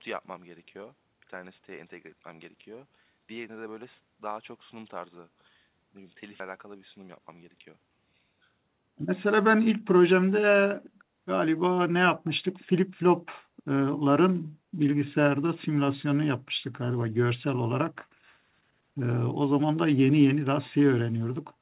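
At 6.40 to 6.42 s the speech does a skip ahead. Roughly 0.4 s of audio was thrown away while later audio was already queued, so the two sides are spliced almost directly. Unlike a dropout, no silence or concealment fills the gap. The sound simply lurches forward.

From 6.51 to 8.20 s comes a jitter buffer speed-up. The receiver, holding more audio than it wanted, repeatedly trimmed short pitch-period pieces, about a fifth of a second in total. Speech runs at about 112% speed and sounds hurried, but, unlike a resampling error, its pitch stays put. All of this passes through a G.711 call path that leaves nothing above 4 kHz.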